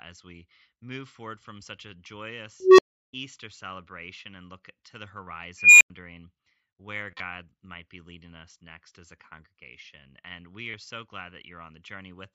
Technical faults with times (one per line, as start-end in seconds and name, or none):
2.60-3.11 unstable filter
5.25-5.27 concealed Bluetooth headset packet loss
5.57-5.90 unstable filter
7.11-7.20 concealed Bluetooth headset packet loss
10.71-10.74 concealed Bluetooth headset packet loss